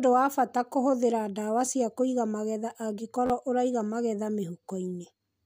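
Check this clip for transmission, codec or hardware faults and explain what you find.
Two repeated buffer faults occur in the speech. At 1.66 s an 11.6 ms block, consistent with a 512-sample buffer, replays once as a click. From 3.26 to 3.30 s it repeats three times, a brief buzz dropping roughly 40 ms.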